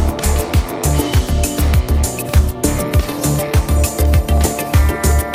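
From 0.60 to 4.38 s, a brief click repeats every 1.26 s. That steady spacing, unlike random dropouts, likely marks clock drift buffer slips.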